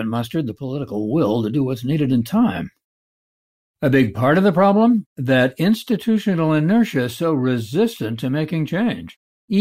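A speech recording with no technical faults to point to. Nothing in it calls for a time or a cause.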